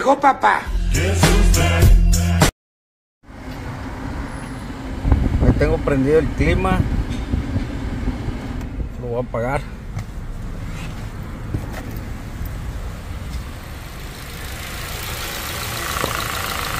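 The signal carries no audible technical faults at any point, with its level and continuity holding steady throughout.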